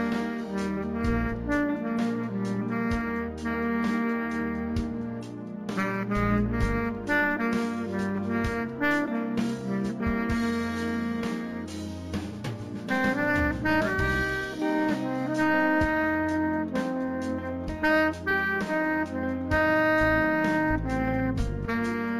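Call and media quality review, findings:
Imaging from linear upsampling, whole clip: 16 kHz audio raised to 48 kHz by straight-line interpolation, a weak anti-imaging filter. Top of band dulled; mirrored spectrum images at 8 to 16 kHz, roughly 35 dB down, give faint metallic shimmer on sibilant and bright content.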